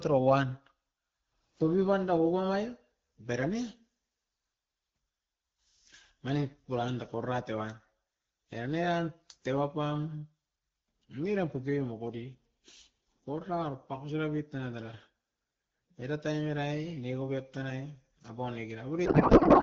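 At 19.05 s the speech collapses into garbled noise and warble that barely tracks it, lasting until the clip ends at 19.63 s. This is a codec payload misread: octet-aligned AMR frames are being unpacked as bandwidth-efficient, so every field lands in the wrong place.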